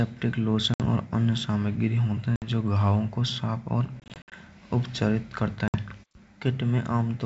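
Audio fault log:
0.74–0.81 s, 2.36–2.48 s (before "जो घाव को साफ"), 4.00–4.33 s, 5.68–5.76 s (after "उपचारित कराता"): packet loss on an ADPCM call. Three drops each leave a hard-edged 60 ms silent hole. At 4.00 s, 160 ms of gaps are spread over 320 ms. The decoder's predictor and step size lose track. Speech returns slightly distorted, then settles.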